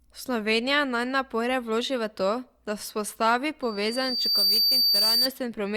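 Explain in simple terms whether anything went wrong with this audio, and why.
Loudspeaker feedback squeal starts at 3.62 s and lasts until 5.30 s. A microphone picked up the speaker it was feeding and looped the sound round. One high tone, near 4.6 kHz, swells over about 0.7 seconds until it is louder than the speech.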